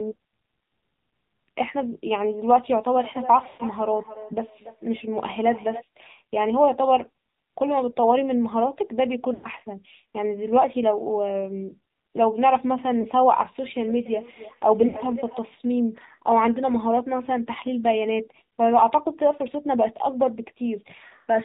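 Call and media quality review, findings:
AMR narrowband mobile codec, whole clip. Low-rate AMR-NB path, consistent with about 7.4 kbps, 8 kHz sampling. Plainly audible damage: nothing above 4 kHz, muffled top end, buzzy, synthetic speech from sparse pulse excitation of the vocal-tract model.

Lost AMR speech frames, four events. Frames failing checksum; decoder repeats last good pitch and filter settings at falling gain. 3.44–3.64 s: 140 ms missing within 160 ms, longest gap 120 ms, drawn-out smear fading toward silence, rough recovery. 9.34–9.47 s: 100 ms gap, same smear. 13.02–13.07 s: one 20 ms frame, brief dip. 14.88–14.96 s: 60 ms gap, short smear.

Feedback echo between two devices, 13.79–15.45 s. Second device in the room replays far-end audio into a nearby mic; echo canceller can't see the other device's playback. Speech returns about every 0.3 s, thinner and ringing, peaking about 15 dB below the direct speech.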